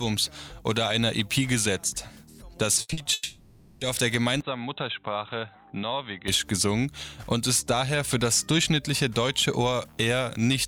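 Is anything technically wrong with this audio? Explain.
Yes. There is a cluster of network losses from about 2.81 s to 3.83 s, followed by a stretch recorded through a poorer input.

From 2.81 to 2.91 s there is a burst of packet loss. About 80 ms of audio never arrived, and the receiver extended the last sound while fading it down. The result is a brief held buzz or hiss, and the sound then picks up slightly further along. It differs from the shorter losses that follow because the invented tail is long enough to hear as a sustained tone, not just a blip.

Two short concealed packet losses come right after, at 2.93 to 2.99 s (40 ms) and 3.03 to 3.07 s (20 ms). In each, a few hundredths of a second went missing. The decoder patched the hole by continuing the preceding pitch or noise and then blending back into real audio. What you hear is a quick smear or wobble, not a buzz, and a brief transient may disappear.

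From 3.13 to 3.83 s there is a long fill of about 680 ms. This is most likely a long network dropout. The concealment is stretched far beyond a burst: a continued buzz or hiss decays over several tenths of a second, never reaching true silence. The audio resumes later with that span gone. Its length is what separates it from the 80 ms burst before it.

From 4.41 to 6.28 s the character changes abruptly, with no gap at either boundary. Nothing above 4 kHz remains, the level sits about 5 dB lower, and a new noise floor appears roughly 50 dB below the signal. This fits an input switched to a poorer device, such as a narrowband headset profile. Unlike the losses, nothing goes missing: the audio stays continuous but sounds dull and boxy until full bandwidth returns at 6.28 s.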